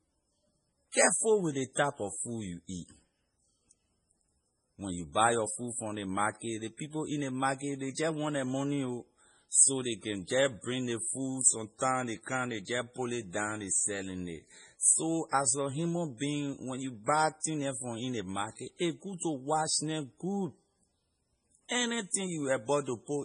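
Throughout the speech, the treble stops dead at about 10.5 kHz, and the sound has a watery, swirling texture. Sibilants break into metallic chirps as faint detail flickers in and out. This is heavy damage, likely from MP3 compression at a very low bitrate, which fits roughly 24 kbps. Under that budget the encoder drops the top band and zeroes weak frequency lines that it judges unimportant. The hard ceiling and the frame-to-frame flicker distinguish it from ordinary low-pass filtering, which leaves the remaining band steady.

Pre-echo appears twice. At 17.40 s, just after "you buy" and before "neh from in", a short hiss rises about 34 ms ahead of a sharp onset. At 19.18 s, after "market a good" and before "to wash neh good", the same happens over about 33 ms. In each case a loud attack fell late in a transform block, so quantisation noise sized for it also filled the quiet gap before it, and the attack itself sounds smeared. 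Because the hiss comes before the transient, this cannot be a reverb tail or an echo, both of which follow the sound.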